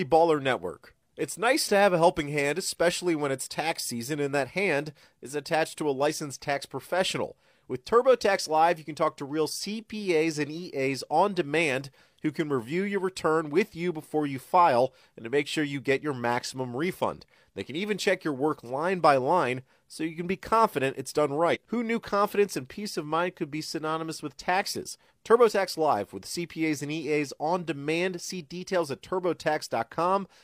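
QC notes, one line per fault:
21.46–21.57 s, compressed frames skipped: a run of whole frames in the encoded stream was never decoded, either lost from the file or rejected by the decoder as corrupt, so playback jumps forward by roughly 50 ms of speech. The sound briefly lurches ahead, dropping a sliver of the speech.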